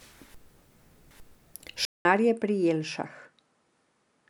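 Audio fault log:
1.85–4.29 s, input switched to a poorer device: after a 200 ms silence the sound comes back about 10 dB quieter, with nothing above 10.5 kHz and a faint new noise floor well below the signal. Likely the recording moved to another microphone with a narrower band.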